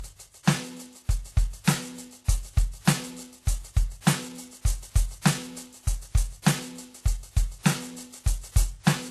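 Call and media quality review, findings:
Music, whole clip: smeared, swirly highs stacked on a second layer of grit; nothing above 12.3 kHz. Likely transcoding between lossy codecs. Sounds like a very low-rate HE-AAC pass (fits roughly 16 kbit/s) re-encoded to WMA (fits about 64 kbit/s). The second encoder wastes bits copying the first one's artefacts, adds its own, and the lowest cut-off sticks.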